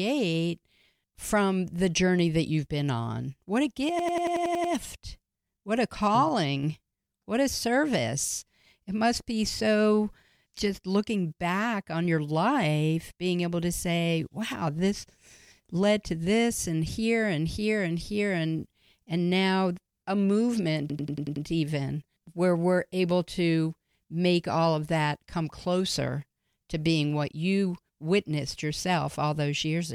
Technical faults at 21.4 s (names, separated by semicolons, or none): system hang loop